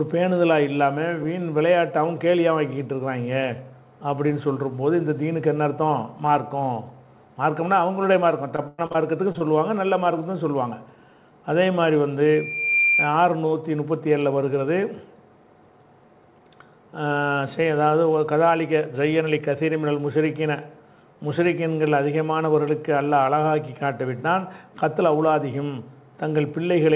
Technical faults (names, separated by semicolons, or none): repeated packet loss (robotic sound); short concealed packet loss; loudspeaker feedback squeal